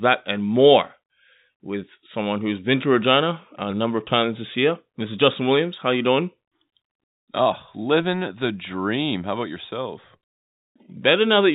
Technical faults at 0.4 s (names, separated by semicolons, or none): none